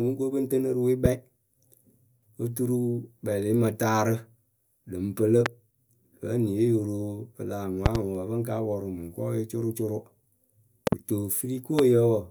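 Loud pops at 1.05–1.08 s after "ŋ tɨnɨ rɨ we", 5.46–5.48 s, 7.86–7.98 s (double) after "yo ro pɨ lah", 10.87–10.95 s (double) and 11.79–11.81 s are sharp thumps about 20 dB over the continuing speech. They are likely voltage pulses entering the chain. They show as tall waveform spikes and thin full-band spectrogram stripes.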